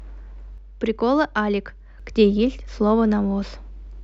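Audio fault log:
0.58–2.00 s, one channel drops out: speech steps abruptly down about 6 dB, then snaps back, likely one stereo side lost before mono summing, not a fade.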